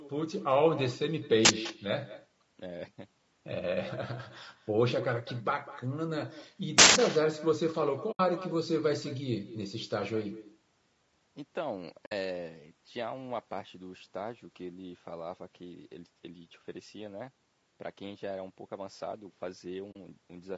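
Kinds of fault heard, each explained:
Echo with no canceller: Every phrase is followed about 200 ms later by a thinner copy, about 16 dB quieter, returned from the far end's loudspeaker.
Low-delay AAC compression: The speech sounds rough and grainy, with noise between harmonics and a synthetic top. It is likely low-delay AAC at 32 kbps.
Uninitialised buffer: Leftover memory plays as loud digital noise. There is a 43 ms burst at 1.45 s and a 171 ms burst at 6.78 s, fitting 2048- and 8192-sample blocks.
AAC frame loss with muting: Lost frames become soft-edged silent holes. They last 80 ms at 8.11 s, 60 ms at 12.05 s and 40 ms at 19.92 s.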